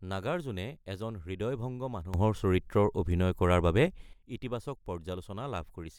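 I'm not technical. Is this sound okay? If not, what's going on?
No. At 2.14 s, right after "নাগাৰ্জুনে এজন হৃদয়ভংগ", the speech and the background hiss suddenly get much louder together, then drop back at 4.13 s. This is a sudden gain jump, likely a volume setting switched instantly instead of being faded in smoothly.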